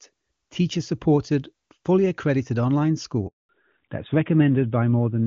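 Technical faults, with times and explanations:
3.27–3.49 s, handover gap: after "supported fully accredited online" the speech drops out for 220 ms. The call switched networks, and no speech frames arrived meanwhile.
3.49 s to the end, fallback to narrowband: nothing above 4 kHz remains, so the speech turns duller and rougher. The call left clean HD Voice for an older narrowband codec.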